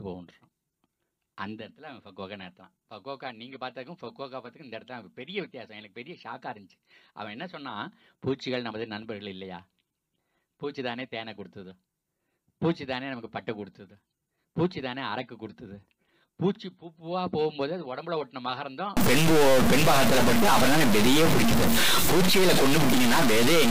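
From 18.97 s to the end, harsh buzzy distortion fills even the quiet gaps. This is a stuck bit, likely a fairly high-order bit jammed by a faulty converter.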